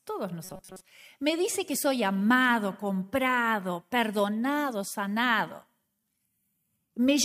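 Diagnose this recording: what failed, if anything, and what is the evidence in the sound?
Robotic sound from repeated short buffers, driver or buffer stage, from 0.44 to 0.86 s, just before "me dice que soy". The speech collapses into a rigid metallic buzz at 188 Hz that loosely tracks the syllables. A 188 Hz buzz corresponds to a period of about 5.3 ms, which fits a very short buffer being replayed. The likely cause is audio arriving too late, so playback loops the last fragment to fill the gap, and most of the real audio in that stretch is skipped.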